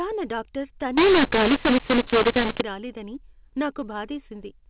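From 0.98 s to 2.61 s the speech turns harsh and distorted, with loudness jumping unevenly and the pauses filling with noise. The cause is mu-law and A-law mixed up: audio coded as A-law was decoded as mu-law, scrambling every sample's level.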